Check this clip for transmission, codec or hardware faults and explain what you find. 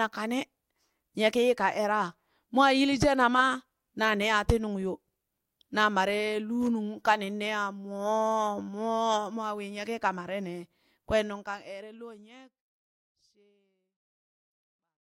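No transmission, codec or hardware faults can be heard in this speech recording. From around 11 s the level fades out smoothly to the end, as an editor's fade would, with no click or hard edge.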